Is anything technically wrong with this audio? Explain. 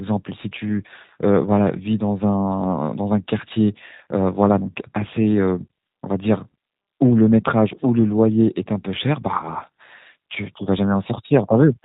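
Yes, the whole clip runs through a G.729 codec, or something that sounds just like it. The speech is rebuilt from a vocal tract filter, a pitch predictor and a few pulses per short frame, at a rate that fits 8 kbit/s. Nothing above 4 kHz survives, so it's muffled, rough and a bit synthetic, and the damage is plainly audible.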